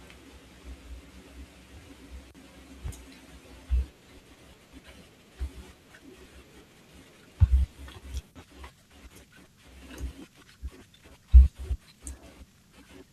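At 0.71 s, DAB burbling: brief short noise blips in the speech as weak-reception bit errors corrupt MP2 sub-band values, showing on a spectrogram as bright blocks in single bands.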